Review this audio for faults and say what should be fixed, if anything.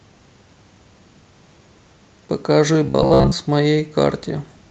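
From 2.85 to 3.32 s there is robotic sound from repeated short buffers. Fresh audio was likely arriving too rarely, so the playback side kept replaying its most recent short slice while the real signal went unplayed. The result is a rigid, metallic buzz at 66.8 Hz, which fits a slice of roughly 15 ms, with most of that stretch made of repeats. The speech only loosely tracks underneath. To prevent it, keep the audio thread fed on time and let the jitter buffer stretch or conceal gaps rather than loop stale data.

From 3.79 to 3.85 s there is a lost packet rebuilt from error correction. Audio went missing in transit, but Opus in-band forward error correction supplied lower-bitrate backup copies, so about 40 ms were reconstructed and no gap opened. The sound instead turns briefly grainier and noisier. The duration points to two lost 20 ms packets. The audio is limited to about 8 kHz by the Opus call path. 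To prevent it, reduce packet loss on the network path, since the backup copies only soften it.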